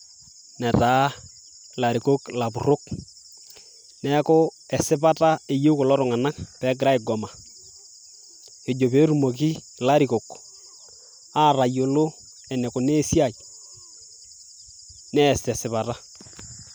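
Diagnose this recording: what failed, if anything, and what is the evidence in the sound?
Nothing failed in this recording; there is no evidence in the sound of any fault.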